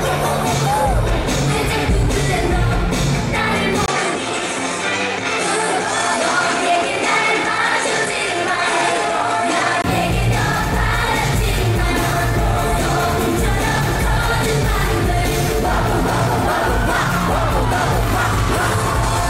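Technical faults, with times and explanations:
3.86 to 9.84 s, input switched to a poorer device: the sound abruptly dulls and loses its air, with nothing above about 11.1 kHz, a brief gap of roughly 20 ms at the changeover, and a faint new background hiss sitting well below the signal, while loudness stays about the same. At 9.84 s the full brightness returns. This is likely the recording input jumping to a different, narrower-band microphone path and then back again.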